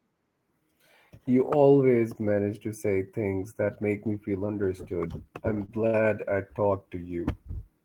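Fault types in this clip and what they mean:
Short stall from a late packet: Twice after "me feel understood I'm", near 5.65 and 5.86 s, a sound holds on, about 30 then 71 ms, before "I talked" resumes.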